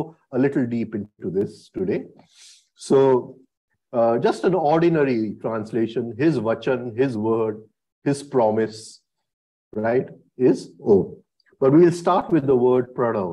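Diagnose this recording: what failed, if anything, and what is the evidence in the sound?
Nothing failed at any stage of this recording, and the sound carries no evidence of a fault.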